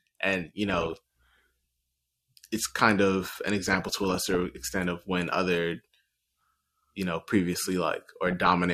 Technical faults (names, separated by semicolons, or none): DAB burbling